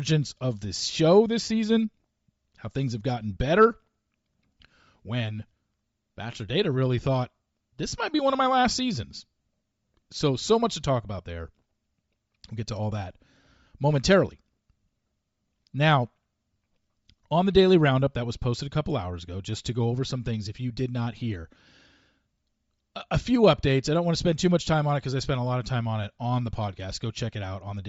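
Throughout the speech there is a breathy, grainy edge, with the upper part of the spectrum sounding hissy and granular rather than detailed. This is likely Bluetooth LC3 compression, the transform codec of LE Audio. At a rate that fits about 32 kbps with 10 ms frames, the encoder discards much of the high-frequency content and fills it with shaped noise, which causes this plainly audible texture.

At 9.42 to 9.44 s, right after "of my last seasons", the sound briefly turns into a short noisy smear before continuing. A blip of the same kind occurs at 22.34 s. These are lost LE Audio frames, each gap fitting about two 10 ms frames. The LC3 decoder covers the missing audio by repeating the previous spectrum with random signs, so for these short moments the speech is replaced by a smeared noise rather than by silence.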